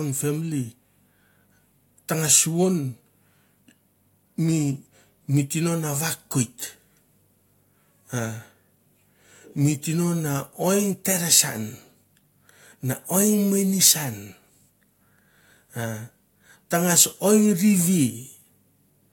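No technical faults can be heard anywhere in the recording.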